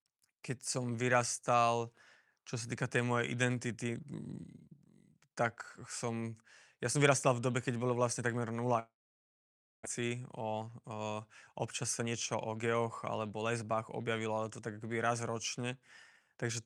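Right after "keď bolo vlastne takmer", at 8.79 s, the speech smears into a fading buzz and then drops to silence for about 0.93 s before returning at 9.87 s with about 600 ms gone. This is likely a long network dropout, with the receiver stretching the last sound until nothing remained.

From 9.99 to 10.91 s the talk sounds slightly rushed, about 9% fast with unchanged pitch. It rushes harder, about 13% fast, from 11.65 to 14.27 s, just before "ale to tak akoby". This is jitter buffer speed-up: the receiver trimmed pitch-period slices, around a tenth of a second and then about 0.4 s, to shed delay built up around the dropout.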